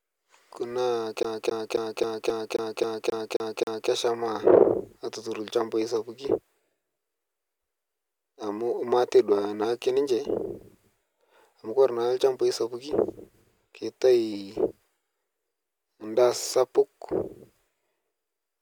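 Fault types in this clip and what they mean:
CD stuck on one turn: A scratch makes the laser jump back one track at the same point of each revolution. The disc keeps replaying the same slice of sound. Here the speech locks into a loop of about 0.27 s from 1.23 to 3.90 s. That slice repeats ten times. A brief mute marks each jump back. The result is a fast, even, mechanical stutter.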